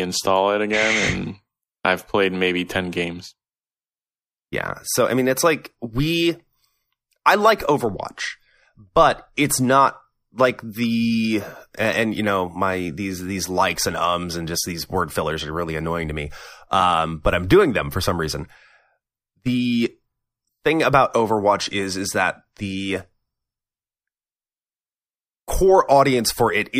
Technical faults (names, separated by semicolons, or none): none